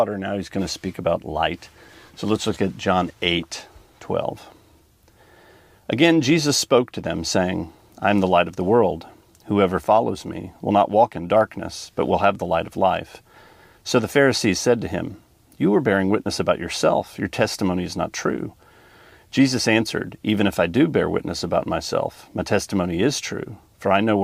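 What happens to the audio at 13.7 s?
Nothing goes wrong at 13.7 s: the audio continues intact through that moment, with no dropout, click, glitch or other fault to be heard.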